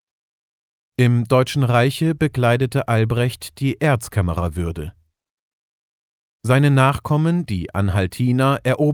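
No technical faults are audible.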